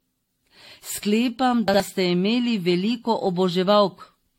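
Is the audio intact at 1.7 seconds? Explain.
No. From 1.68 to 1.80 s, just before "ste imeli veliko", there are chunks out of order: a 60 ms chunk plays one slot late, after the chunk that should follow it. Nothing is missing, but the sound jumbles briefly. The waveform shows three abrupt discontinuities, and the spectrogram shows vertical broadband lines with mismatched formant tracks between them.

Across this moment the sound is also swirly, smeared and hollow, with blurred attacks. This likely comes from generation loss, with repeated AAC-LC encoding at 64 kbit/s, several passes in a row. On a spectrogram, everything above 16.5 kHz is empty, and there are patchy holes and smeared, grainy texture below that.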